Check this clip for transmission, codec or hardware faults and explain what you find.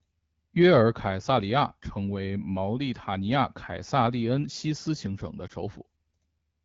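One transmission fault is audible: lost AMR speech frames, heard against the clear sound of the AMR wideband (HD Voice) codec, which fits about 12.65 kbit/s. From 5.47 to 5.52 s, just after "斯行省的", the decoder patches a frame that failed its checksum by reusing the previous pitch and vocal tract settings at lower gain. That fits a single lost 20 ms frame. The result is a brief dip or warble, not the hard silent hole of a plain dropout.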